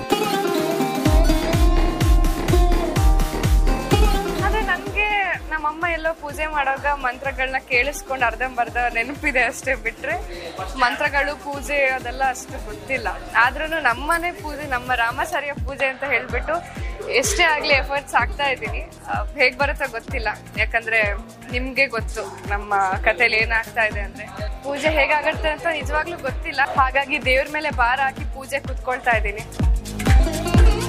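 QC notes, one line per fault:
Nothing to flag here; I listened all the way through and didn't catch a single fault.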